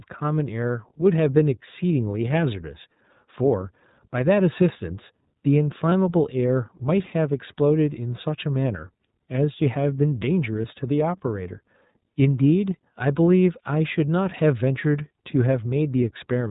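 From start to finish the speech passes through the iLBC codec, and the damage is plainly audible. Everything above 4 kHz is missing, giving a narrowband, telephone-like sound, and the excitation coding leaves a rough, slightly synthetic texture on the speech. The character fits iLBC's 15.2 kbps mode with 20 ms frames, where each frame is coded without reference to the previous one.

Two short dropouts from lost iLBC frames occur, at 5.90 to 5.93 s and at 10.62 to 10.65 s. Each gap is about 20 ms, consistent with a single lost frame. The decoder fills it by repeating the last pitch cycle mixed with noise, so each sounds like a brief held, slightly buzzy vowel. Because frames decode independently, the speech returns cleanly right after each gap.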